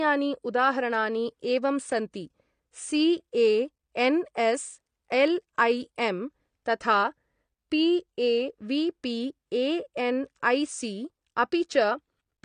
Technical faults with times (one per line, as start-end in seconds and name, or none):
0.00-12.45 AAC compression